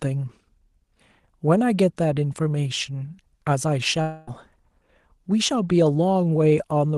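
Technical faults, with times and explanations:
4.01 to 4.29 s, long network dropout: about 0.26 s of sound gives way to a fading buzz, longer than a single packet-loss blip, likely the receiver concealing a lost stretch.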